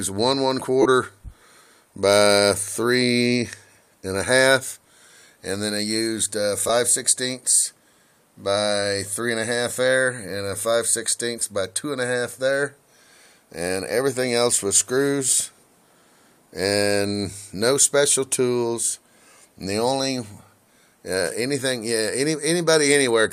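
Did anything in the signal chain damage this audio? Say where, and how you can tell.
Yes. The damage is in the wireless link: lost LE Audio frames at 0.82–0.86 s, 6.68–6.70 s and 11.40–11.42 s. The first gap of about 30 ms fits four 7.5 ms frames, and the later ones of about 15 ms fit two. The LC3 decoder fills each hole by repeating the last spectrum with scrambled phase, so tonal content briefly smears into noise instead of clicking or dropping to silence, as a buffer underrun or hard dropout would.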